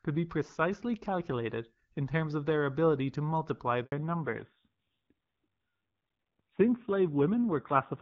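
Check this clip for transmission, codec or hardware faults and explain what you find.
Two transmission faults occur close together, both tied to a network switch partway through the speech.

Handover gap, 3.84 to 3.92 s: When the call moved between networks, no speech frames arrived during the switch, leaving an 80 ms hole. The voice collapses into silence almost at once instead of fading naturally, and whatever was spoken in that window is simply missing. Because the new link resumes straight afterwards, the gap sounds like an abrupt cut rather than a pause in delivery.

Fallback to narrowband, from 3.92 s to the end: Once the new link comes up, the call no longer carries HD Voice and drops to an older narrowband codec. Before the switch, the wideband coding sounds clear, with only light codec damage, consistent with AMR-WB at 12.65 kbit/s. After it, nothing above 4 kHz remains. Sibilants lose their edge, the voice turns dull and boxy, and a coarser, rougher grain appears. 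This fits AMR-NB at 7.4 kbit/s.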